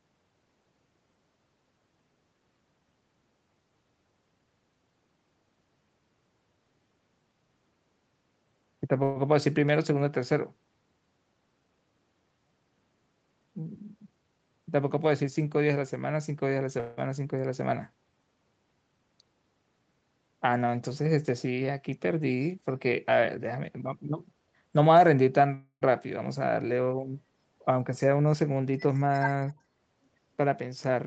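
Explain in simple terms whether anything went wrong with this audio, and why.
Yes, a few things went wrong in this speech.

Call audio freeze: At 9.03 to 9.18 s and 16.80 to 16.99 s, the sound stretches into a short fading buzz before carrying on. At 25.54 to 25.83 s it fades briefly to silence. Delayed network packets likely caused these pauses. Nothing is lost; the speech just resumes late.

Jitter buffer speed-up: From 23.21 to 24.86 s and 27.86 to 29.09 s, the speech runs about 9% faster, but the pitch stays the same. The receiver trimmed tiny slices to catch up after the delays. Each stretch sounds hurried.

Speech suppressed in double talk: At 29.50 to 29.58 s, the voice dips sharply for a moment. Both sides were likely talking at once. The echo canceller then mistook this voice for echo and turned it down.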